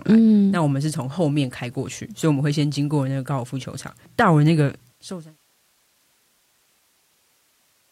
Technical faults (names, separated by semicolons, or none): none